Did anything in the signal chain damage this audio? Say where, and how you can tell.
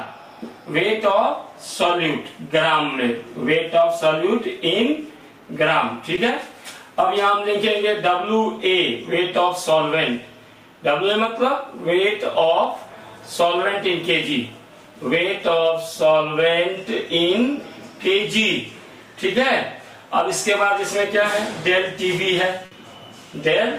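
Yes. Short concealed packet loss at the network stage, from 6.15 to 6.19 s. About 20 ms of audio never arrived in time. The receiver continued the preceding sound to fill the hole, then blended back. It's heard as a brief smear.

A burst of packet loss, also at the network stage, appears from 22.65 to 22.73 s. About 60 ms went missing in a row. The receiver stretched the last sound while fading it down. Audio then resumes further on, with that stretch lost.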